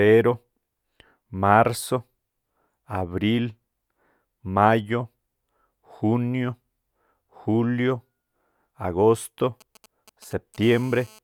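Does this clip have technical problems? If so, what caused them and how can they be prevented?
Yes. From 9.61 to 10.57 s there are GSM signalling bursts: a galloping dit-dit-dit of ticks and brief buzzes, roughly 25 dB below the speech. A nearby 2G phone is exchanging short radio bursts with the network, and the audio circuitry rectifies them into sound. On a spectrogram these appear as short vertical clusters with a harmonic comb spaced at 217 Hz. The waveform shows small, sharp-edged packets. Keeping phones well away from microphones, cables and preamps prevents this.

From 10.63 to 11.19 s it becomes a steady GSM phone buzz, a hard, raspy tone at 217 Hz, about 28 dB below the speech, consistent with the phone now being in a call. Its transmitter pulses continuously at 217 Hz, and the rectified envelope produces a fundamental with many harmonics that bear no relation to the speech. A spectrogram shows unbroken horizontal lines at 217 Hz multiples. 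The waveform carries a regular square-edged ripple. Switching phones off or to flight mode near the recording chain avoids it.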